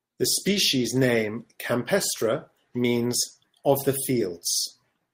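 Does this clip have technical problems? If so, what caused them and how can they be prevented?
No, there's nothing technically wrong to hear in this speech clip, so there's nothing to prevent here.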